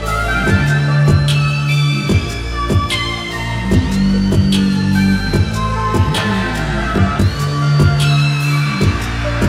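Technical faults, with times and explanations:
throughout: channel delay (comb filtering). One channel lags by roughly 20 ms, so the mono sum cancels evenly spaced frequencies from around 30 Hz upward, sounding rough and slightly doubled.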